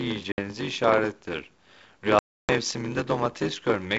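Right from the start there's a block size mismatch (padded) running through the whole clip. One stage hands over shorter blocks than the next one reads, which fits a 512-sample read, so each block gets topped up with zeros. That little gap repeating in every block gives a steady buzz at about 94 Hz. The speech also drags, playing at about 0.86 of its proper speed, though the timbre stays about where it should be.

On top of that there are two bursts of packet loss on an ADPCM call. The first runs from 0.32 to 0.39 s, with about 60 ms of audio gone, likely a handful of packets. The second is much bigger, from 2.19 to 2.53 s, with 300 ms lost, probably around thirty packets. Each one is a hard-edged hole of silence. When the sound comes back, the decoder's predictor and step size are out of step with the sender's, so the speech returns slightly distorted for a few tens of milliseconds before it settles.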